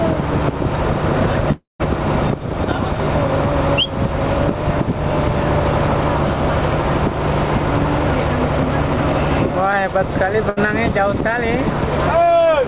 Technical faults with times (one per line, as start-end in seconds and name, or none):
1.52-1.81 long network dropout
10.49-10.58 burst of packet loss